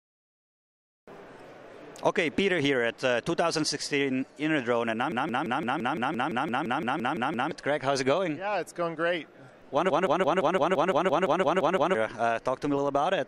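At 5.12 s the sound locks into a system hang loop until 7.51 s. The computer stalled while the audio hardware kept replaying its ring buffer. One 0.17 s slice repeats 14 times, about 5.9 times per second, which fits an 8192-sample buffer. It sounds like a machine-gun stutter. The same fault returns from 9.90 s to 11.95 s, with 12 repeats. Each stall costs about two seconds of audio.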